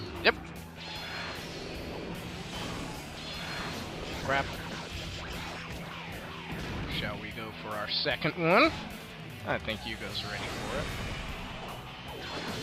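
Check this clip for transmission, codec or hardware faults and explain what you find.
There's video or display buzz from 4.03 to 9.87 s. A screen or video cable is leaking into the audio path, giving a 59.94 Hz field-rate buzz topped with hash and a thin 15.7 kHz line-rate whine, roughly 25 dB under the sound.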